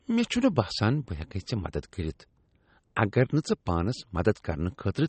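Right through the speech there's plainly audible MP3 compression, likely a low-bitrate encode, which fits about 32 kbps: nothing above 8.4 kHz, and a watery, swirly smear on the sibilants.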